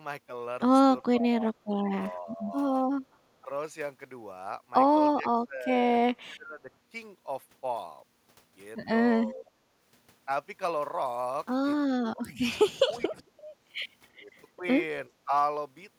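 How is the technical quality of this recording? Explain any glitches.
The recording has repeated speech suppressed in double talk, at 1.02–2.53, 3.41–3.49, 5.15–6.71, 9.23–9.57, 11.97–12.30, 12.86–13.32 and 14.22–15.31 s. The speech ducks, from a slight dip to roughly 25 dB, likely because the echo canceller could not separate this side's speech from the overlapping far-end echo and turned both down.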